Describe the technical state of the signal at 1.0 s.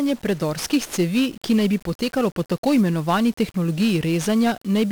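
At 1.0 s the speech is fuzzy and crackly, with a dense bed of broadband hiss swallowing the treble. This heavy 1-bit DFPWM compression damage runs through the whole clip rather than starting or stopping here. Each sample is reduced to a single up-or-down bit nudging an adaptive level, so the waveform is only roughly traced and the error spreads as strong noise across the band. The coarseness fits a stream of around 48 kbps.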